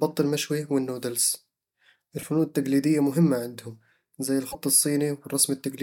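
At 2.19 to 2.23 s, chunks out of order: a 10 ms chunk plays three chunks late, giving a brief jumbled stutter. Nothing goes missing, unlike a dropout. At 4.48 to 4.55 s, damaged data in a compressed stream makes the decoder lose sync and hunt for the next frame header, producing a short glitch. Unlike the reordered chunk, this sounds codec-shaped rather than like shuffled audio.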